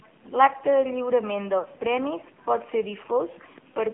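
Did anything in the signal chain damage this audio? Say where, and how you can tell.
Yes. Throughout the clip the speech sounds buzzy and synthetic, confined to a telephone band of about 250 Hz to 3.4 kHz with nothing on top. The codec stage is at fault: AMR narrowband mobile coding at a low rate, plainly audible, and consistent with AMR-NB's 7.4 kbps mode. The codec rebuilds the voice from a vocal-tract model excited by a few pulses per subframe, so at this rate the excitation is sparse and the result turns mechanical.

At 1.60 to 1.66 s, with 40 ms of audio lost, the speech briefly smears into a short warble and dips before recovering, rough for a moment. These are lost AMR speech frames at the network stage, consistent with two consecutive 20 ms frames failing their checksum after radio errors. The decoder concealed the gap by repeating the last good pitch and vocal-tract parameters at falling gain. 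The gap was too short to fade fully to silence.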